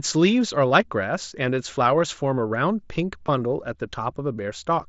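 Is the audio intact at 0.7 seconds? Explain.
No. At about 0.69 s there is a brief concealed Bluetooth headset packet loss lasting 15 ms, which fits two lost frames. The receiver filled the gap by repeating the closest-matching piece of the preceding waveform, so the dropout sounds like a brief buzzy tone held at full level, with a slight warble as real audio resumes. On a waveform, a short repeated cycle appears at full level. On a spectrogram, a thin band of smeared, periodic harmonics shows at that instant.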